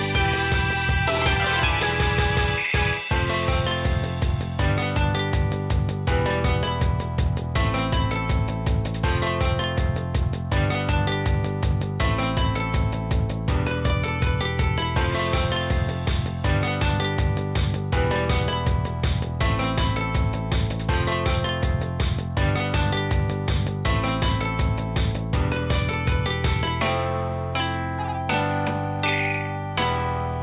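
No faults are audible: the audio stays narrowband throughout, with nothing above 4 kHz, the ceiling you would expect from a normally working call path whose character fits G.711 A-law at 64 kbps.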